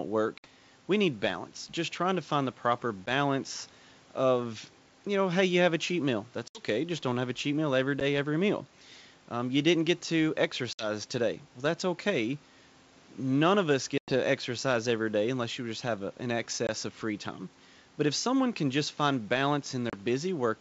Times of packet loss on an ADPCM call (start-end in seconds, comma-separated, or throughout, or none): 0.38-0.47, 3.06-3.10, 6.48-6.63, 8.00-8.03, 10.73-10.89, 13.98-14.13, 16.67-16.70, 19.90-19.95